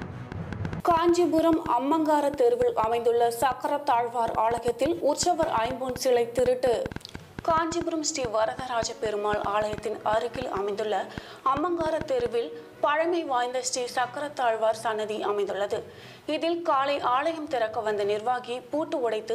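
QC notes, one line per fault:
0.02–12.27 s, train of clicks: about 70 similarly shaped pulses, near 5 per second but unevenly spaced, roughly 10 dB above the sound, likely from interference rather than random crackle.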